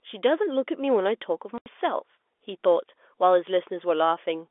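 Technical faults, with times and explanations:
1.58 to 1.66 s, packet loss filled with silence: the speech cuts out completely for 80 ms. The receiver put digital silence where the packets went missing, so both edges are abrupt. The gap fits four 20 ms packets.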